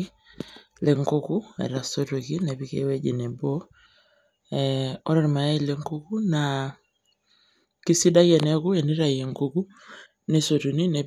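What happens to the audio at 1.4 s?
At 1.38 s there is a single sharp click in the speech, a case of dropped samples. The likely cause is that roughly one sample, a few hundredths of a millisecond, was lost from the stream. The waveform then steps straight from one value to a later one instead of moving smoothly between them. That gap is far too brief to remove anything audible, so what comes through is the discontinuity itself. It sounds as a tick and shows as a thin vertical line across the spectrum.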